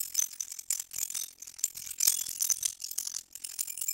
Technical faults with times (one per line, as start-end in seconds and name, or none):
0.00-3.93 overlap-add ripple